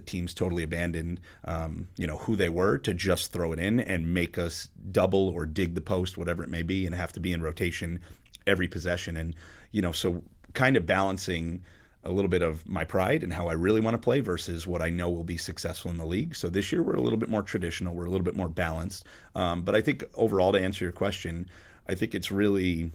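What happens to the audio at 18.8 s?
Nothing goes wrong at 18.8 s: the speech carries on intact through that moment, with only the light, steady colouring of the Opus voice compression that runs through the whole clip.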